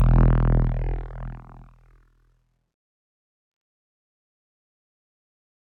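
From the very start, 0.01 to 0.25 s, there is hard clipping: the peaks run only about 1 dB past what the stage can pass, so their tops are sliced flat. It is heard as crackle on the loudest moments. The waveform shows squared-off peaks, and the spectrogram shows thin vertical streaks of high-frequency harmonics.

Across the whole clip, a noise suppressor meant for speech is working on music or other sounds, treating sustained tones, ambience and tails as noise. Its gain swings by something like 20 dB, so the sound pumps and thins. On the waveform, the envelope breathes unevenly. On the spectrogram, held energy fades between onsets.

From 1.37 to 2.58 s, sound is cut by the noise suppressor, dropping as much as about 12 dB for roughly a second in total. Sustained parts and decays sink or end early while sudden attacks survive. The spectrogram shows onsets intact but the energy after them darkening abruptly.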